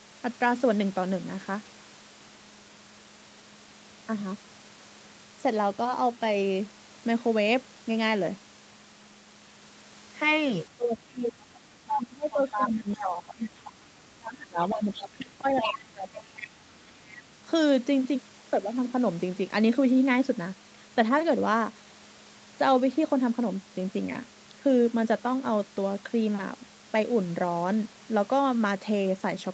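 From 10.77 to 13.53 s the speech is suppressed in double talk. The level dips by as much as about 25 dB over roughly two seconds. This is likely because the echo canceller, facing both sides at once, turned down everything.

Within that stretch, from 11.88 to 12.69 s, the other side's voice leaks through at nearly the talker's level. A fainter scrap follows at 13.65 to 13.71 s.

The speech is suppressed in double talk again from 14.14 to 16.55 s, with a similar drop of about 25 dB totalling roughly two seconds. Residual echo from the loudspeaker likely bleeds in at 14.7 to 15.25 s, 15.58 to 15.65 s and 16.4 to 17.26 s. These leaks are quiet, from about 10 to 20 dB below the speech.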